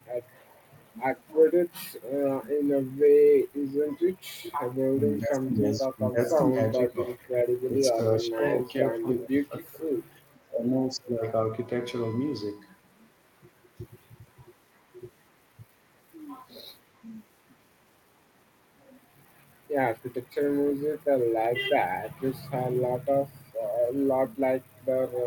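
The speech dips sharply at 1.71 to 2.1 s and again at 3.8 to 4.19 s. The level falls by up to about 25 dB, in short broken patches. This is likely speech suppressed in double talk. The echo canceller probably heard both sides at once and turned everything down.

From 4.44 to 4.58 s, a faint delayed copy of the voice comes through. It trails by 416 ms and sits about 15 dB below the speech. This is likely an echo leak. A loudspeaker's sound reached a microphone and was not fully cancelled.

The suppression returns at 4.95 to 7.34 s, 7.71 to 9.81 s and 10.33 to 11.24 s. Each time, about a second or more of speech is chopped and pushed down, by as much as about 30 dB. A last short dip of about 20 dB comes at 20.16 to 20.39 s.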